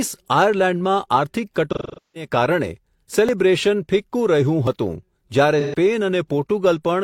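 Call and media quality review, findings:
AAC frame loss with concealment, 1.73–2.27 s and 5.60–5.74 s: smeared patches where the decoder repeats the last good spectrum, fitting roughly ten and three lost frames.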